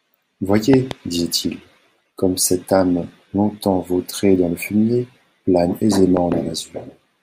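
At 0.74 s, and again at 6.17 s just after "dans le fumier plane", a loud pop appears as a double pop, peaking roughly 15 dB above the speech, which continues underneath. The likely cause is a sudden voltage step, from a plug, switch or static discharge, entering the chain.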